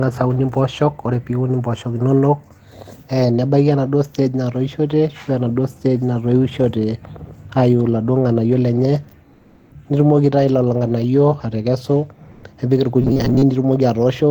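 Right after "ng'anayio lenye", from 9.37 to 9.67 s, the background drops out for about 300 ms and is replaced by comfort noise, a flat, featureless hiss at the same level as the real room tone, which sits about 37 dB below the loud parts. It happens again from 12.31 to 12.43 s, for about 120 ms, where the background is about 30 dB down. The likely cause is discontinuous transmission of the kind Opus DTX does: the sender goes quiet when it hears no speech, and the receiver fills the gap with synthetic noise.

From 13.02 to 13.44 s the speech turns into robotic sound from repeated short buffers. It becomes a stiff, metallic drone locked at about 134 Hz, which fits a chunk of roughly 7.5 ms being looped. About half the audio in that stretch seems to be repeats rather than new material. That most likely comes from packets arriving too slowly, so the last bit gets replayed while fresh speech is skipped.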